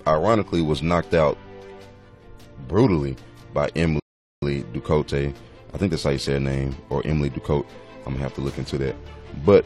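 The player ran out of downloaded audio and halted for about 425 ms, a rebuffering stall: the audio drops to silence from 4.00 to 4.42 s, then resumes exactly where it stopped.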